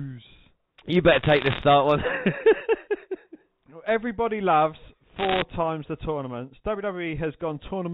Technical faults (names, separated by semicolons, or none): bit errors on a digital phone line